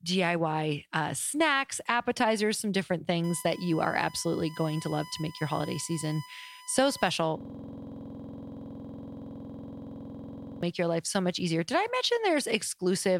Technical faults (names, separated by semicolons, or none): USB whine; system hang loop